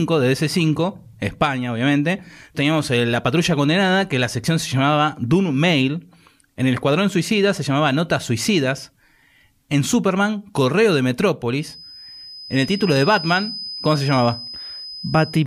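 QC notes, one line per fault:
11.56 s to the end, feedback whistle. A thin, steady tone at 5 kHz rises behind the speech and holds until the clip ends. It sits around 15 dB below the voice, swelling and fading slowly in level but never building. The likely cause is the loudspeaker output leaking back into the microphone with loop gain just at the feedback threshold. That keeps one high frequency ringing without running away.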